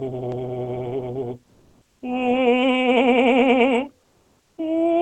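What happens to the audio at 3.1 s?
Nothing goes wrong at 3.1 s; the music passes through intact there, with only the Opus call path's ordinary coding and its top end stopping near 8 kHz.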